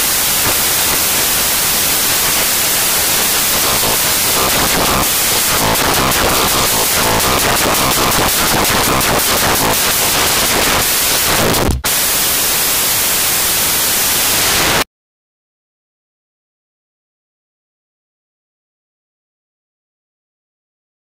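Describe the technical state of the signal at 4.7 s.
At 4.7 s the reader is assembling each sample from the wrong bytes, either misaligned by one byte or with their order swapped, as it is for the entire clip. The rapidly fluctuating low-order bits end up as the most significant part of every value, so the true waveform is buried under loud, harsh broadband noise. At this moment it dominates the signal.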